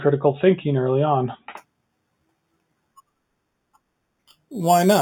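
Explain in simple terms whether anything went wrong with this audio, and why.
Something did go wrong. From about 1.57 s, right after "thinking early on", to the end, the speech picks up a bright, metallic fizz. This is imaging from sample-and-hold upsampling. The audio was converted to a higher sample rate by simply repeating each sample with no smoothing, so mirror copies of the sound show up just above it, between about 4 and 8 kHz. Unlike steady hiss, this fizz rises and falls with the speech and stops in the pauses.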